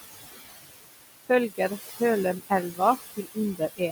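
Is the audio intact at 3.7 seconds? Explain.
No. The speech there is cut by the noise suppressor. The span runs from 3.56 s to the end of the clip at 3.92 s. The suppressor mistakes the quiet tail of the speech for background noise. It turns those bands down along with the noise. The deepest drop is about 19 dB. Only part of the span suffers, around 150 ms in all. Soft consonants and word endings sound swallowed or faint.

Noise suppressor artifacts are also present at this point, as they are throughout. The suppressor lowers what it judges to be steady noise by about 16 dB, frame by frame. It does this band by band. The room noise, about 10 dB below the speech, sinks in the gaps and rises under the speech.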